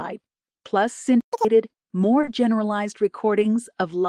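At 1.21 s the speech just stops dead and stays silent until 1.33 s, about 120 ms of nothing. That's a playback stall: the sound cuts out mid-flow rather than fading, which most likely means the player ran dry of buffered data or its audio thread got held up for a moment. When it comes back, it resumes where it stopped instead of skipping anything.

Right after that, from 1.33 to 1.45 s, you get catch-up at higher speed. The player burns through its backlog at double speed by resampling, so for that stretch the speech sounds rushed and chipmunky, lifted by roughly ten semitones. Running at 2x for 120 ms recovers exactly the 120 ms it lost, and then pitch and pace drop straight back to normal.

Later, at 2.21 s, there's a pair of short concealed packet losses back to back, one at 2.21 to 2.25 s and the next at 2.25 to 2.29 s. Each is a 20 ms hole that never reached the decoder in time. The receiver papered over each one by extending the preceding sound, then blended back into the real signal. 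With two in a row you hear a brief smeary wobble there instead of a clean transition, and the detail in that little span gets blurred.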